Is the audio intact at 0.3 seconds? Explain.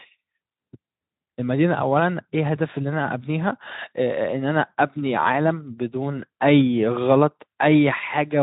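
Yes, the audio is intact at 0.3 seconds, with no fault at that moment.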